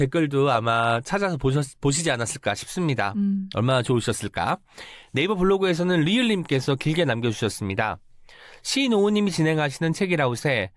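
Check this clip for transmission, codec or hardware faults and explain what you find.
Nothing in the signal points to a technical fault, and the speech arrives intact with no disturbance from the channel or the equipment.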